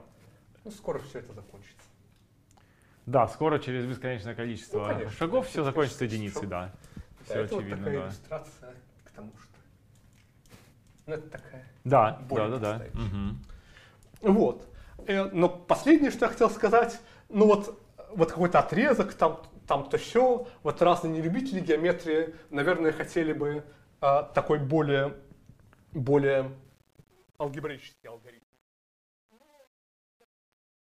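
From 26.64 s to the end at 30.88 s, the closing fade shows truncation distortion on a fade. The fading stage keeps too few bits and adds no dither, consistent with about a 9-bit word length, so the waveform breaks into coarse square steps as the level drops. From 27.5 s onward the quiet tail sounds gritty. On a waveform view the decay looks like a staircase, and a spectrogram shows broadband grainy hash instead of a clean taper.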